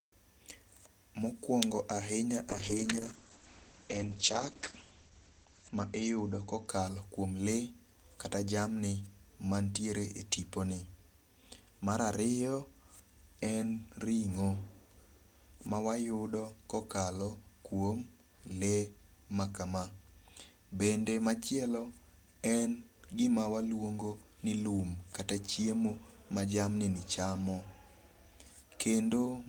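A speech clip with a call bitrate drop from 2.51 s to 6.73 s, where the sound turns rough and muffled before recovering. The encoder's rate falls from 32 kbps to 9 kbps and sits at its lowest for about 3.1 s. The audio bandwidth shrinks from 20 kHz to 8 kHz as well. On a spectrogram this shows as a hard ceiling at 8 kHz across that stretch, with the energy above it missing and blocky, smeared texture below.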